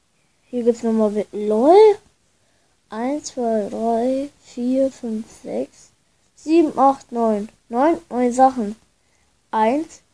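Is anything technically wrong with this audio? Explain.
No, nothing is technically wrong with this audio.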